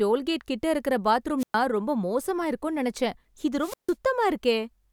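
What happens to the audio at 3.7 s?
A wireless microphone squelch dropout runs from 3.59 to 3.95 s. The FM radio link fades, so hiss briefly swells. Then the receiver's squelch mutes the output for about 150 ms, leaving a hole of near silence before the speech returns.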